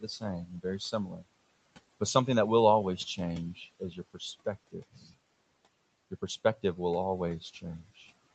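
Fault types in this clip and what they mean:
Speech cut by the noise suppressor: the suppressor mistook quiet parts of the speech for background noise and turned them down with it, so soft sounds and word endings come out swallowed, dipping by about 11 to 19 dB, deepest near 4.7 to 5.2 s, with another dip just after "something that will always". A network dropout would cut to silence or glitch abruptly. Here the level sinks and recovers over a fraction of a second, with the room noise ducking alongside.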